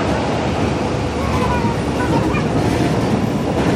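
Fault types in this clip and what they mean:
Audio read two samples at a time (double speed): the player treats each pair of samples as a single frame, so the sound here runs at twice its real speed and sits a full octave, 12 semitones, higher.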